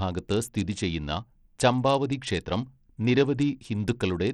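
Bluetooth SBC compression runs through the whole speech clip, from start to finish. The top of the spectrum flickers in and out, and a gritty, grainy noise with aliasing rides on the speech. This is the likely result of the subband codec starving its upper bands of bits and quantising the rest coarsely. The plainly audible damage points to a low bit pool, roughly in line with an 80 kbps stream.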